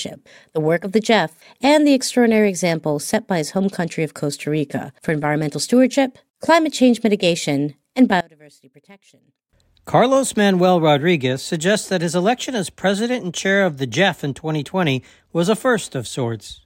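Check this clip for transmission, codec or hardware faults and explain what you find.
One fault stands out. One channel inverted, 8.21 to 9.50 s, right after "climate change mitigation and": the speech drops by about 26 dB to a faint residue, likely because one channel's polarity flipped and the centred speech cancelled in the mono sum.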